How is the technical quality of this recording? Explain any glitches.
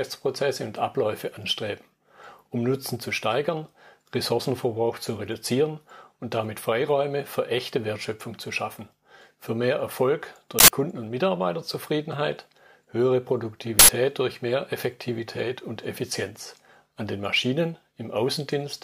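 Two glitches stand out. At 10.59 s and again at 13.79 s there is a sudden, loud burst of harsh digital noise lasting about 93 ms each time. This is an uninitialised buffer: the block went to playback before any audio was written into it, so leftover memory was played as samples. The length fits a 4096-sample block.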